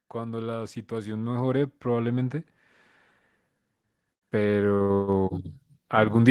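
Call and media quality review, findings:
Automatic gain rising, 0.12 to 2.42 s: voice and background noise swell together, about 10 dB over a couple of seconds. The AGC decided the input was too quiet and ramped its gain up slowly. A second rise at 4.32 to 5.4 s adds about 6 dB, with the same pattern but a quicker ramp. The noise floor climbing along with the voice is the giveaway. Check the AGC target level. The call path sounds like Opus, with the top end stopping around 12 kHz.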